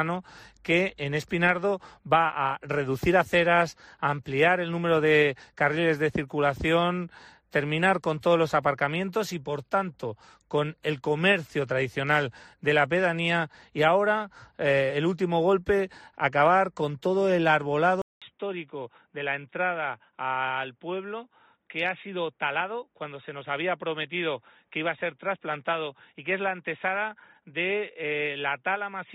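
At 18.02 s the sound drops out for 200 ms, then returns duller and a few decibels quieter, with a faint new noise floor. Nothing remains above 3.8 kHz, a flat ceiling on a spectrogram, most likely from the input switching to a poorer device.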